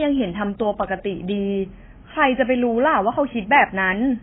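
Speech running through the whole clip is band-limited, with nothing above about 3.7 kHz, and has a layered roughness in which different kinds of coding artefact sit on top of one another. The likely cause is transcoding between lossy codecs: a very low-bitrate first encode, possibly AAC at around 16 kbit/s, later re-encoded to WMA and then MP3, each at 48 kbit/s. The lowest cut-off survived every pass. On a spectrogram the energy stops at a hard ceiling near 3.7 kHz, with blotchy, holed time-frequency patches beneath it.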